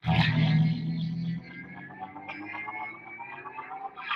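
A noise suppressor built for speech runs on this sound throughout. It treats steady parts as noise, so the level pumps, with swings of around 15 dB. The suppressor cuts the sound from 1.39 to 2.3 s, by up to about 10 dB, and again from 2.92 to 3.09 s, by about 7 dB. Steady parts sink there and decays shorten.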